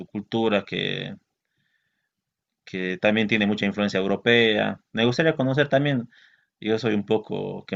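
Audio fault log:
Nothing in this speech recording stood out as a fault on listening.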